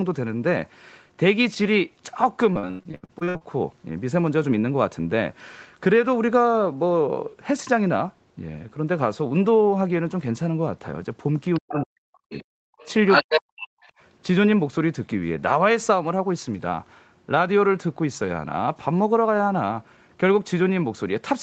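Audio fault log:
2.53–3.43 s, repeated packet loss (robotic sound): the speech breaks into roughly a dozen short holes, the longest about 84 ms, within under a second. About half of that stretch is patched by stretching and repeating the preceding waveform rather than carrying real signal. Because each patch sits so close to the next, the audio turns choppy, with syllable fragments missing.
11.54–11.81 s, 12.30–12.40 s, 12.78–12.86 s, 13.08–13.41 s and 13.62–13.67 s, other side's voice leaking through: a second voice surfaces in brief scraps. Most are well below the main talker, from about 15 dB down to about 30 dB down. At 13.08–13.41 s it rises to about 5 dB above the talker and briefly dominates. The likely cause is far-end loudspeaker sound reaching the microphone that the echo canceller failed to remove.
11.59–12.54 s and 13.24–13.71 s, speech suppressed in double talk: the main talker's level sinks sharply and in places almost vanishes, with the deepest dips around 40 dB. 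About a second is affected in the first span and about half a second in the second. Both spans overlap the leaking far-end voice, which points to the likely cause: the echo canceller could not separate near and far speech and attenuated both together.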